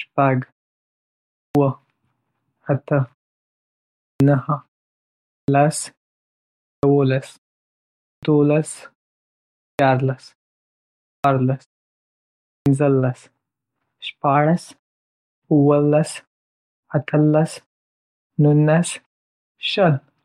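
Speech resumes abruptly, missing its first sounds, at 1.44, 4.10, 5.38, 6.72, 8.12, 9.69, 11.13 and 12.55 s. This is a clipped start after a pause: following each 0.8 to 1 s gap, the sleeping output device needs roughly 100 to 113 ms to wake, swallowing that onset.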